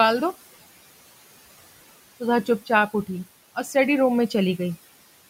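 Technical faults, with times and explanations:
Throughout, noise suppressor artifacts: the suppressor treats the room's steady background noise as noise and pulls those bands down by about 16 dB frame by frame. The room noise, about 20 dB below the speech, sinks in the pauses and swells back under each phrase.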